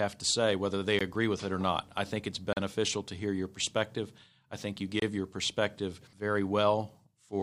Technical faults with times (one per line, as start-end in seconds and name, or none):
0.99 Bluetooth stall
2.53-2.57 Bluetooth stall
5.00-5.02 Bluetooth stall